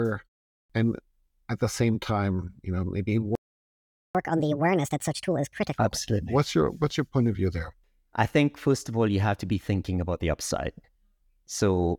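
A speech recording with a playback stall followed by catch-up at higher speed. Just after "time you know maybe", the sound cuts to silence at 3.35 s and stays silent until 4.15 s, a gap of about 0.8 s. The likely cause is the player running short of buffered data or its playback thread being blocked. Unlike a dropout that skips material, the speech picks up where it stopped. From 4.15 s to 5.74 s the backlog plays at 1.5 times normal speed, resampled so that the pitch also climbs by about seven semitones. That is how the player wins back the time lost in the stall. The joint rise in tempo and pitch sets it apart from a pure pitch-shift fault, and the quick return to normal at 5.74 s ties it directly to the stall.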